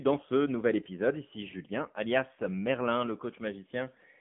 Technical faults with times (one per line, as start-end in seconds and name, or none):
0.00-4.21 AMR narrowband mobile codec